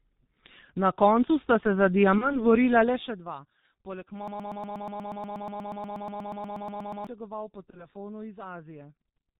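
A speech recording carried throughout by the G.723.1 codec, and the damage is heavy: nothing survives above 4 kHz, so the voice is muffled and hoarse, and the slow-moving 30 ms analysis smears consonants into one another, a sound that fits the 6.3 kbit/s mode. VoIP packet loss concealed by the speech codec is audible twice. The first follows "koncu sta se za", from 2.18 to 2.45 s. The second runs from 7.70 to 7.88 s. Each gap sounds consistent with a single 30 ms frame going missing. The decoder fills it by carrying its last pitch and filter forward at falling gain, which gives a brief, fading smear. Because each frame is predicted from the previous one, the voice stays weak and distorted for tens of milliseconds after the gap itself. The largest fault is a broken-record loop from 4.28 to 7.07 s. A 120 ms fragment repeats back to back 23 times, producing a rapid, mechanical stutter at roughly eight repeats per second. 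Whatever was said in those nearly three seconds is gone. The likely cause is a stalled player, encoder or stream that kept re-sending the last buffer it held.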